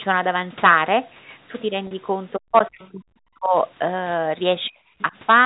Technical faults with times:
1.87-1.91 packet loss with pitch repetition
2.38-3.55 speech suppressed in double talk
2.57-2.88 other side's voice leaking through
4.64-4.69 other side's voice leaking through
4.70-4.79 speech suppressed in double talk
4.99-5.04 other side's voice leaking through

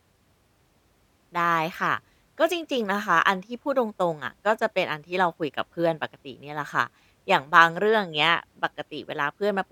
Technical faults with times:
none

